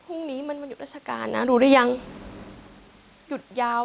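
The automatic gain control in the call chain judged this speech too loud, or its background noise too strong, and pulled its gain down between 1.58 and 1.89 s, a drop of about 6 dB spread over roughly a third of a second. The voice and the room noise behind it sink together, which separates this from the talker's own shifts in distance around 1 s and 2.5 s. Everything stops near 4 kHz, consistent with a G.711 narrowband call.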